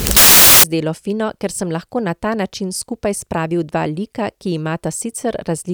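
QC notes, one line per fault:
0.00–0.64 s, samples built from the wrong bytes: mis-assembled sample bytes turn low bits into loud, harsh broadband noise, shown as full-band spectrogram wash and a dense waveform block.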